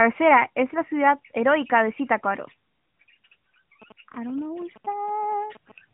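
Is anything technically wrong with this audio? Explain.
Yes. From 3.82 to 5.72 s there is GSM signalling interference: a nearby 2G phone exchanging short control bursts, which the audio circuitry rectifies into a galloping dit-dit-dit of brief 217 Hz buzzes, roughly 25 dB below the speech. On a spectrogram it shows as clustered vertical stripes with harmonic lines at 217 Hz spacing; the waveform shows rectangular gated blocks. All of this sits inside the narrowband mobile channel, which cuts off near 3.8 kHz.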